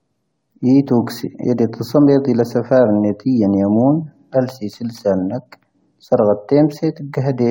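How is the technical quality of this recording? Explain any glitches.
One glitch affects the recording, a brief dropout early in the speech.

Compressed frames skipped, at 0.86 to 0.90 s: roughly 20 ms of audio never plays because encoded frames were lost or rejected as corrupt, so the speech jumps forward.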